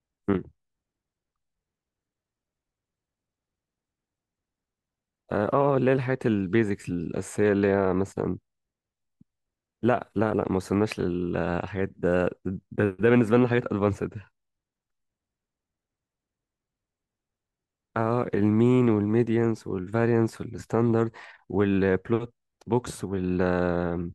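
Nothing goes wrong anywhere in this speech recording; there's simply no technical fault to point to at any moment.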